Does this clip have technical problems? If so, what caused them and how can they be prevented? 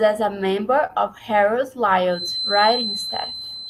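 Yes. Between 0.55 and 1.39 s there are scattered short gaps: about five tiny packet losses, none longer than roughly 20 ms, each patched by extending the preceding sound, so you hear brief ticks and smears rather than silent holes, and the passage runs about 13 ms long. A steadier network path and a larger jitter buffer with forward error correction would prevent this.

From 2.06 s onward a thin 4.1 kHz feedback whistle sits about 10 dB below the speech, swelling and fading slowly in level. Unlike mains hum, it is a single high tone, likely caused by a loudspeaker-to-microphone loop hovering just below runaway. Headphones, lower monitor gain or echo cancellation would prevent it.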